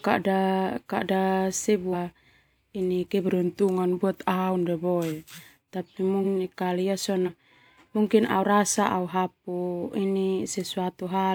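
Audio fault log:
1.92 s, 6.23 s, 7.25 s: compressed frames skipped. The sound jumps ahead, roughly 0.2, 0.3 and 0.15 s lost, whole 42.7 ms frames missing or rejected.
3.27–5.24 s: drift correction step. Sound abruptly slows about 5.5% and drops nearly a semitone, then snaps back, likely a clock-matching rate change.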